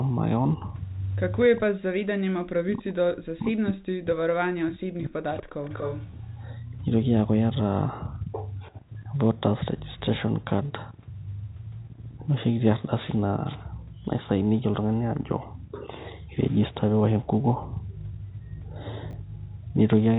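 From 1.45 to 5.71 s, the speech keeps sinking in level. It dips hard, by around 40 dB at its deepest. About four seconds are affected in total. This is likely speech suppressed in double talk. Both ends seem to talk at once. The echo canceller cannot tell the near talker from the loudspeaker echo. So it turns everything down, and the wanted speech goes with it.

Inside that stretch, from 1.56 to 1.60 s, a faint delayed copy of the speech appears. It sits about 25 dB below the speech and trails it by 239 ms. A second, louder copy follows from 5.37 to 6.11 s, only about 10 dB down, with the same 239 ms delay. This is likely echo leak. The far end plays the call on a loudspeaker. Its canceller misses part of what its microphone picks up and sends it back. The result is a short, ghostly repeat of the speech.

From 19.11 to 19.13 s, there is a brief garbled moment. This is chunks out of order. 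One small piece of audio plays a slot later than it should. It swaps places with its neighbour, leaving hard joins at each edge. The timing fits a 10 ms chunk arriving one chunk late. Nothing is missing, but the order is wrong.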